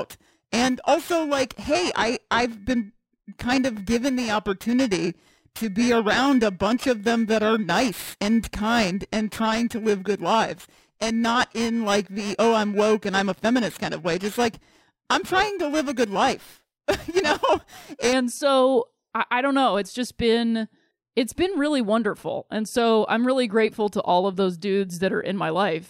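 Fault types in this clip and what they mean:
periodic clock jitter: interference wobbling the converter's sampling clock at a single rate, here roughly 2 kHz, spreading sidebands about 2 kHz either side of each component, so the speech carries a rough, metallic edge from 0 to 18.1 s that is strongest on high frequencies and vanishes in pauses, unlike steady hum or hiss.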